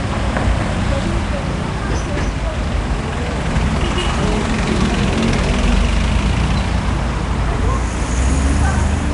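From start to finish the audio carries plainly audible coding damage, most likely Nellymoser compression, the Flash-era Asao codec. Nothing is present above about 10.6 kHz. Each short block was given a fixed, small bit budget, so weak bands were dropped and refilled with synthetic noise. The result is a rough, hissy haze clinging to the sound and a smeared, underwater texture, which fits a bitrate of around 44 kbps.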